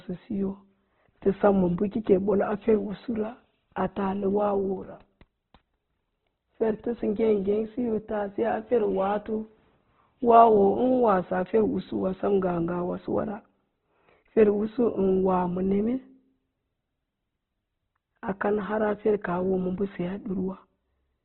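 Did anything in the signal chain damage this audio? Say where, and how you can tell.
Yes, at the codec stage, for the whole clip. Nothing reaches above 4.2 kHz, and the speech sounds rough, grainy and noisy rather than swirly or hollow. That points to Opus compression, likely in its CELT music mode at a very low rate of about 12 kbps. The encoder keeps each band's energy but fills starved bands with noise, leaving few spectral holes. That sets it apart from MP3's warbling, and the grain sets it apart from a plain low-pass filter.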